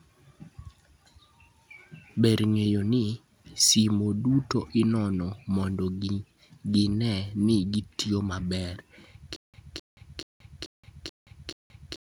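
At 9.36 s the speech falls into stutter with silent gaps: a 0.26 s burst repeats six times, each followed by 0.18 s of dead silence, likely a stalled stream retrying.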